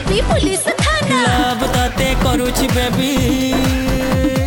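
From 1.32 s to the end, imaging from sample-and-hold upsampling adds a bright metallic fizz between 12 kHz and 24 kHz, about 21 dB below the signal. This points to 24 kHz material raised to 44.1 kHz by repeating samples without smoothing. Unlike steady hiss, the fizz follows the sound's level, and its lowest copy moves opposite to the pitch.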